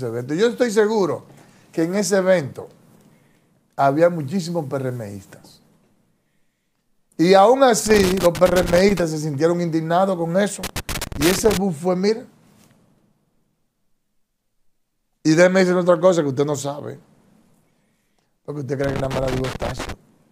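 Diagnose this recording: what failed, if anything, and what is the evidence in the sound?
Loose connector crackle at 7.86–9.00 s, 10.63–11.57 s and 18.84–19.92 s: an analogue wiring fault, where a worn contact intermittently breaks, chopping the signal into irregular scratchy bursts.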